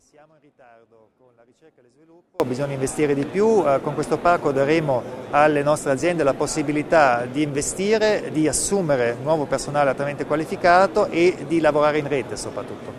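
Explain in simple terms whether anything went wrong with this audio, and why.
Something went wrong at the very start. From the beginning of the clip to 2.4 s there is an audio dropout to a faint residue, so only a faint trace of the sound remains, far quieter than normal, before it abruptly returns. The likely cause is a brief loss of the signal while the recording path stayed switched on.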